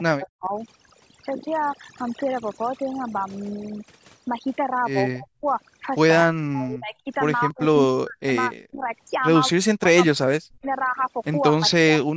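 Overdone noise removal runs through the whole recording. A heavy-handed noise reducer leaves near-silent gaps with twinkling specks.

The speech dips sharply or breaks up at 0.1 to 0.52 s, 5.13 to 5.45 s, 6.27 to 7.07 s, 7.48 to 8.32 s, 8.49 to 8.86 s, 9.49 to 10.19 s, 10.4 to 10.66 s and 11.53 to 12.16 s. The drops reach roughly 40 dB. This is likely speech suppressed in double talk, where an echo canceller ducks the talker while the far side speaks.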